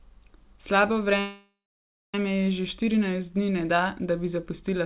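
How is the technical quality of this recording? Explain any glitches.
The recording has one clear glitch, a call audio freeze, and its bandwidth stops at 4 kHz, which fits a G.711 mu-law call codec at 64 kbps.

From 1.2 to 2.15 s the sound stalls into a fading buzz, then about 0.58 s of silence, before resuming exactly where it stopped, with nothing lost. The likely cause is delayed packets draining the jitter buffer, so the receiver stretched the last sound, inserting a 0.94 s gap.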